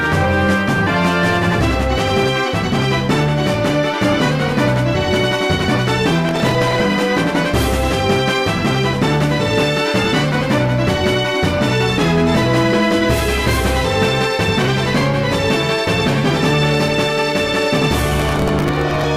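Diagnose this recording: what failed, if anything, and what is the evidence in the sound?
Processor overload crackle at the driver or buffer stage, 6.29 to 6.80 s and 18.20 to 19.06 s: gritty tearing from stale audio replayed at buffer deadlines a few milliseconds apart, finer-grained than network dropouts.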